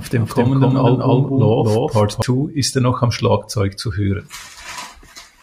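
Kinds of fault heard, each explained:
Doubled audio track: from the very start until about 2.22 s the speech is heard twice, a second full-band copy trailing roughly 300 ms behind at about the same loudness, likely from the signal being captured again through a slower path. Unlike an echo or reverb, the copy has no decay or room colouring, shows no repeats fading away, and stops abruptly at 2.22 s rather than trailing off.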